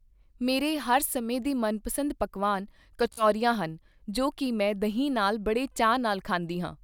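At 3.13 s the speech breaks into a Bluetooth stutter that lasts until 3.25 s. Audio packets arrived late or not at all. The receiver filled the gap by replaying its last short buffer again and again. Each repeated slice is only tens of milliseconds long, so the run sounds like a brief machine-gun buzz. When the sound returns, about 46 ms of speech is simply gone, which fits roughly three lost packets.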